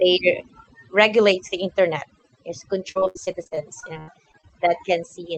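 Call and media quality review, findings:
Overdone noise removal, throughout. Background pulled down and breaking up into twinkling specks. Probable component: noise suppressor set too aggressive, gating individual frequency bands that sit near its noise estimate and taking quiet speech detail with them. The top end stops around 8 kHz, which fits a wideband Opus call path.

Repeated packet loss (robotic sound), 2.91–4.47 s. Choppy stretch with pieces missing, about 16 separate holes, longest about 77 ms, roughly a quarter of the span patched. Probable component: network/jitter buffer. Loss concealment extends the last sound into each gap, and the next gap follows before the audio recovers.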